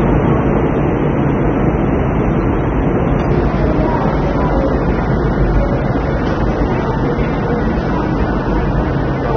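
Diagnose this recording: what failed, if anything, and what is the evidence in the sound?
Codec stage. Nothing sits above 6.3 kHz throughout, and the sound is dull and smeared. This is likely AAC compression, consistent with AAC-LC near 24 kbps.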